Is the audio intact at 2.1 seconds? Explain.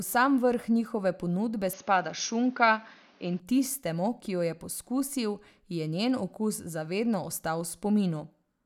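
No, not quite. From 1.73 to 3.40 s the speech goes dull and a bit boxy, with everything above 6.7 kHz simply gone and a new background noise sitting roughly 30 dB under the voice. There's no gap and no real jump in loudness at the change. That's most likely the input switched to a poorer device, a narrower-band mic taking over just ahead of "tistemu ki jo je", before the fuller sound returns.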